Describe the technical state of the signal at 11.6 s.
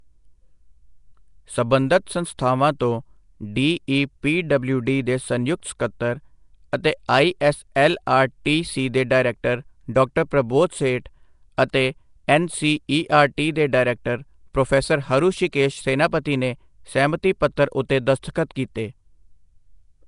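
At 11.57 s there is a brief pre-echo, about 11 ms of hiss just before a sharp attack. The codec spreads its quantisation noise across the whole block, so noise meant for the loud onset leaks into the quiet moment before it. The attack sounds softened and smeared.

The whole passage carries a rough, hissy halo with a watery smear. Nothing is heard above about 10.6 kHz. This points to Nellymoser compression, likely the Nellymoser Asao codec at roughly 44 kbps. Weak bands are filled with noise rather than real detail.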